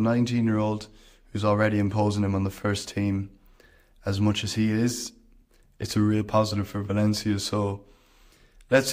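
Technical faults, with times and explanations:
No technical faults, with times or explanations, are present in this speech clip.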